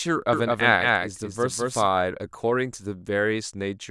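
A doubled audio track runs from 0.33 to 1.87 s: a second, full-band copy of the speech trails about a fifth of a second behind, at roughly equal loudness, with no decay or room colour. It switches in and out abruptly, likely from a slower capture path duplicating the signal.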